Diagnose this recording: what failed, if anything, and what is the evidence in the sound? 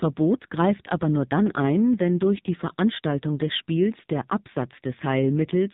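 Across the whole clip the speech sounds boxed-in and buzzy, with nothing above 4 kHz and a synthetic, rasping edge on every syllable. That points to the codec stage: the AMR narrowband mobile codec (AMR-NB). It samples at 8 kHz and rebuilds the voice from a vocal-tract model excited by a few pulses per 5 ms subframe. The heavy buzz suggests one of its lowest modes, around 5.9 kbps, where too few pulses survive to sound natural.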